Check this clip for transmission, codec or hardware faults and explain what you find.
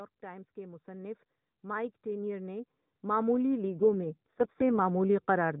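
Three faults are audible in this speech clip, one running throughout and two tied to specific stretches, all carried over an AMR narrowband mobile path whose 4 kHz ceiling and light codec colouring are heard across the whole clip.

From start to finish the speech sounds hollow and slightly phasey, with a dull, scooped upper midrange that never moves. This is channel delay (comb filtering). One channel arrives a fraction of a millisecond behind the other, and when the two are summed to mono their shared content cancels at regularly spaced frequencies. The first notch sits around 3 kHz, right inside the narrow phone band.

Between 0.21 s and 5.56 s the level creeps steadily upward, and the background lifts with the speech rather than the speech alone getting louder. By the end it is about 18 dB higher than at the start. This is automatic gain rising. The gain control judged the input too quiet and kept raising its gain slowly across nearly the entire clip, so everything in the signal swells together.

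From 3.72 s to 4.80 s the speech turns rougher, buzzier and more synthetic, then recovers. The bandwidth stays the same and there is no dropout. This is an AMR rate drop. A weak radio link likely prompted the network to switch the codec to a lower rate so more bits could go to error protection. The change in quality fits a fall from 12.2 kbps to 4.75 kbps and a return to the higher rate afterwards.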